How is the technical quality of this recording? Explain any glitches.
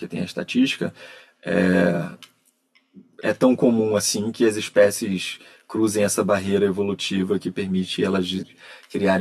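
The speech sounds hollow and phasey for the whole clip because of channel delay (comb filtering). One channel lags the other by roughly 10 ms, so the mono sum cancels evenly spaced frequencies starting near 40 Hz.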